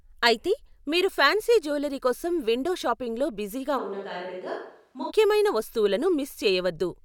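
From 3.80 to 5.09 s, the close microphone's signal likely drops out and the recording falls back on a distant microphone. The speech turns suddenly roomy and hollow, thinner in the bass, around 5 dB quieter, with room noise rising to roughly 35 dB below the speech, then snaps back.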